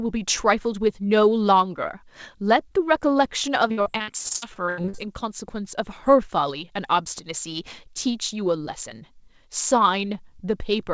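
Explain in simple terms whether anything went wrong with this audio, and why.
From 3.68 to 5.00 s the speech turns choppy and robotic. This is repeated packet loss: over a dozen short chunks, up to 80 ms each, went missing, and the call software patched each hole by stretching the previous sound, so about 42% of that stretch is filler.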